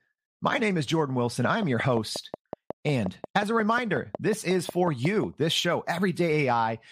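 A train of clicks runs through this speech recording from 1.45 s to 5.25 s: about twenty near-identical pulses at a steady 5.5 per second, ticking over the talking and through the pauses alike, with peaks around 10 dB above the speech itself. The even spacing and repeated shape point to a periodic disturbance outside the sound source, likely interference from nearby equipment or a faulty connection or power supply injecting the same spike again and again.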